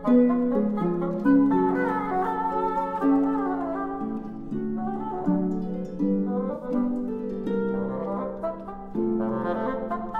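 Around 6.53 to 6.65 s, AAC frame loss with concealment sets in: roughly 85 ms of coded data goes missing, which fits four dropped frames, and the decoder rebuilds the gap from the preceding spectrum, so the sound turns briefly smeared, noisy and phasey before resuming.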